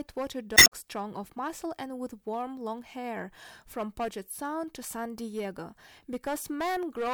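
It's a speech recording with hard clipping running the whole way through. The level going into some stage was roughly 11 dB more than it could pass, so the peaks get sliced flat, and a few percent of the samples end up cut off at that stage's limit. Those squared-off tops throw harmonics high up the spectrum, adding distortion on the loud peaks. On top of that, between about 0.54 and 0.73 s there's damaged data in a compressed stream. Some of the encoded bytes there were corrupted, so the decoder misreads the frames, loses sync and hunts for the next valid header. You hear a short glitch, and the timing shifts slightly, with roughly 18 ms more audio than belongs there.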